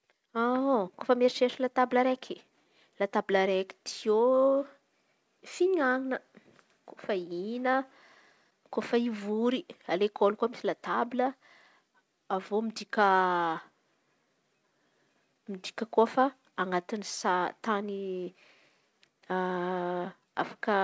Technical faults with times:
none

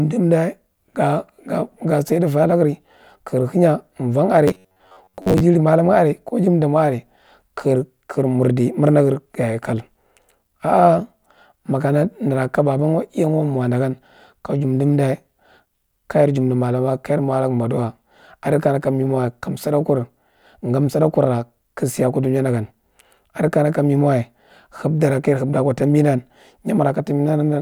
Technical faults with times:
4.48-5.40 robotic sound from repeated short buffers

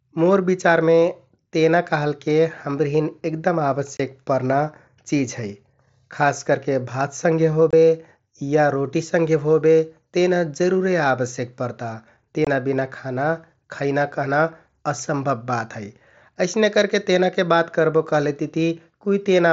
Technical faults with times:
3.97-4.00 unconcealed Bluetooth headset packet loss
7.71-7.73 unconcealed Bluetooth headset packet loss
12.45-12.47 unconcealed Bluetooth headset packet loss

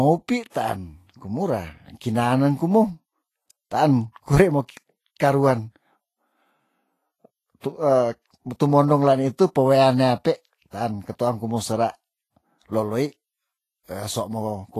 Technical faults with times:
0.00-14.80 Vorbis compression
4.13-4.16 pre-echo
7.60-7.64 pre-echo

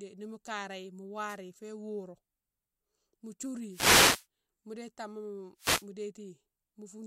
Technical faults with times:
1.26-1.37 wireless microphone noise hit
3.69-4.26 wireless microphone noise hit
5.57-5.87 wireless microphone noise hit

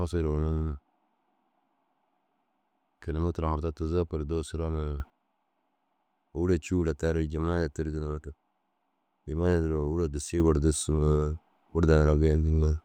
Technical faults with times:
5.00-5.10 sudden gain jump
10.40-12.84 sudden gain jump

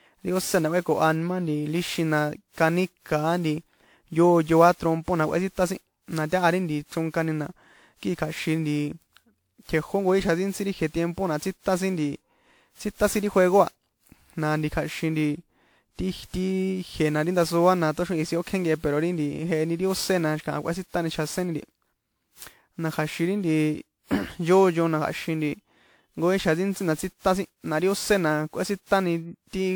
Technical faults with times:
0.00-29.75 sample clock jitter
0.00-29.75 generation loss

